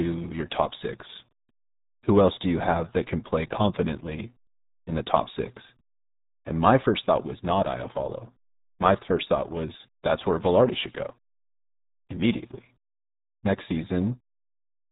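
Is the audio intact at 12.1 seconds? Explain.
No. At 12.1 seconds the speech sounds muffled and gargly, with a watery, smeared texture and no brightness above about 3.8 kHz. This is the RealAudio 14.4 codec, and the damage runs through the whole clip, not just this moment. The heavy damage fits a stream of roughly 8 kbit/s, built for dial-up modems. At that rate the coder discards the upper band entirely and models what remains so coarsely that fine detail collapses into gargle.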